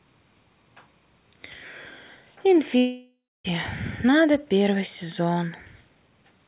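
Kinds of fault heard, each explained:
Long network dropout: From 2.78 to 3.46 s the audio breaks off, likely because packets stopped arriving for a long stretch. The receiver stretches the last sound into a fading buzz for a few tenths of a second, then about 0.27 s of near silence follows before the audio resumes with roughly 0.4 s lost. On a spectrogram the harmonics smear into a flat, decaying band, then a blank gap. The waveform shows a shrinking envelope dropping to almost nothing.
Jitter buffer speed-up: From 4.05 s to the end at 6.47 s the speech runs about 8% fast while keeping its pitch, because the receiver is draining a backlog by repeatedly cutting out pitch-period-sized slices, roughly two tenths of a second in total. It sounds slightly hurried. On a spectrogram the harmonic spacing stays unchanged while syllables and pauses are compressed in time. The waveform shows shortened segments with small, frequent splice points between periods.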